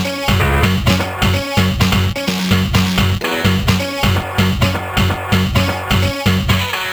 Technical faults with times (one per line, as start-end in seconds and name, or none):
0.00-6.93 crude rate conversion